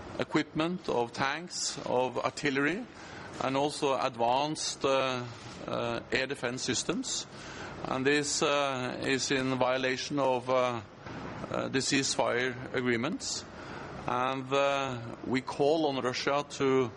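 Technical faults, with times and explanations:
No technical faults detected.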